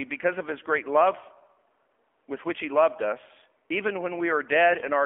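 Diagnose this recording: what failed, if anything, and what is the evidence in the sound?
The whole recording has passed through the AMR narrowband mobile codec, a codec-stage fault. Everything sounds buzzy and synthetic, and the band is confined to a telephone line, about 250 Hz to 3.4 kHz, consistent with AMR-NB at a low mode around 7.4 kbps. On a spectrogram, energy stops abruptly near 3.4 kHz with an empty band above and little below 250 Hz. Harmonics look smeared, because the voice is rebuilt from a vocal-tract model driven by sparse pulses.

From 4.72 to 4.83 s there are AMR bit errors, a network-stage fault. For about a tenth of a second the sound turns hoarse, scratchy and gargly while keeping roughly its pitch and level. That duration fits about five corrupted 20 ms frames. Weakly protected bits arrived flipped at a rate of several percent, so excitation pulses and fine gain and spectral values decoded wrongly. 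The waveform envelope stays intact, but the spectrogram shows ragged, noisy harmonics there.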